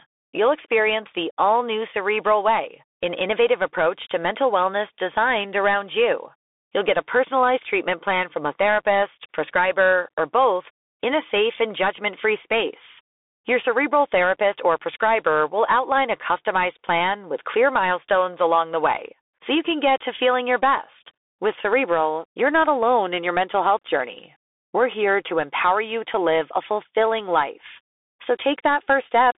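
From start to finish the speech passes through a Bluetooth CVSD headset codec. Nothing survives above 3.8 kHz, and the band sits near 300 Hz to 3.6 kHz. Unlike a plain telephone filter, a granular hiss rides underneath and s sounds turn scratchy, which fits a 64 kbps CVSD stream.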